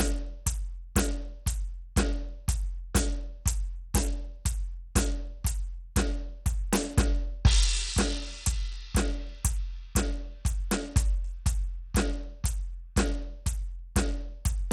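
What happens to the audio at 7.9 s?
At 7.9 s the music sounds dull and gritty: the treble is thin and flickers in and out, and a rough, grainy noise with aliasing sits on top. This runs through the whole clip. It is likely Bluetooth SBC compression at a bitrate around 80 kbps. With that small a bit budget, the codec starves its weaker upper sub-bands of bits and quantises the remaining bands coarsely.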